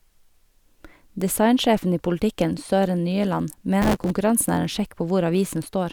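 From 3.82 s to 4.11 s the speech is torn by a burst of processor overload crackle. The processor falls behind and misses dozens of buffer deadlines over a short stretch. The spacing of the grit fits very short buffers, around 3 ms each. Each missed buffer is filled with a scrap of old audio. Its hard edges click against the live signal. Together they make a gritty, tearing rasp over the speech. It stops once the load eases.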